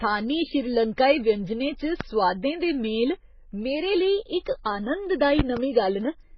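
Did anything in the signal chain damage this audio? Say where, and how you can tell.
Yes. Right through the speech there's nothing above about 5.9 kHz, and the band-limited smear sounds like two lossy codecs stacked, a low-rate MP3 pass later re-encoded at a low HE-AAC rate. That's likely transcoding between lossy codecs at the codec stage. The second encoder burns its small budget re-coding the first one's artefacts and adds its own swishy, spectrally patchy texture, so you hear both layers at once, and the lowest cut-off in the chain is the one that sticks.

Then there are two loud pops, likely from the analogue wiring or a switching transient. The first is a single sharp pop at 2.01 s, just before "दे मेल मेरे", roughly 15 dB above the speech. The second, from 5.39 to 5.6 s, is a quick double pop at about the same level. In both cases the speech keeps going underneath, which is what you get when a voltage step or spike is summed into the signal and the downstream circuitry turns it into a short thump.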